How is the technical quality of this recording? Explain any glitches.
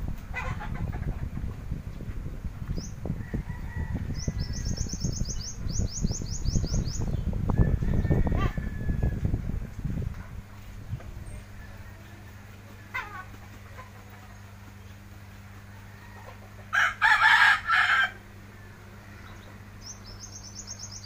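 The recording has one fault, mains hum, present from start to finish.

A steady low 50 Hz tone runs underneath the whole clip, sitting roughly 20 dB below the main sound. It comes from the power line coupling into the signal path, through a ground loop or a nearby transformer.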